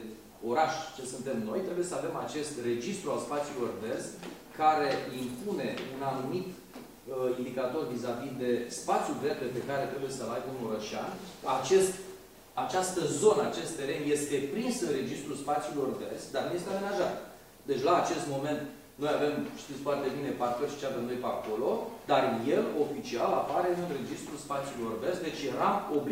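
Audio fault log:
No fault is found in this audio.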